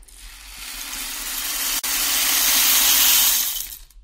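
A short recording of sounds drops out abruptly for about 44 ms, from 1.79 to 1.84 s. The continuous sound stops, goes briefly silent, then resumes from where it left off, with the hard edges of the hole softened. This is a gap at a join of encoded pieces. Sections roughly 2 s long were encoded separately and spliced without trimming, so the encoder's start-up delay and final-frame padding remain as silence at the seam.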